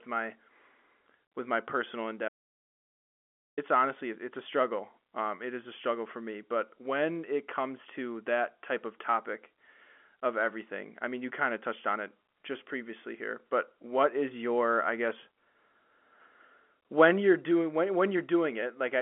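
A telephone-band speech recording, limited to roughly 250 Hz to 3.4 kHz with nothing above about 3.8 kHz, as G.711 coding would give. At 2.28 s the audio drops out to silence and returns at 3.58 s, a gap of about 1.29 s. The gap is silent, with no line noise or room tone, so the input was likely lost upstream, through a disconnected device, a failed link or a mute, while the recorder kept writing samples. Whatever was spoken in that interval is not recoverable.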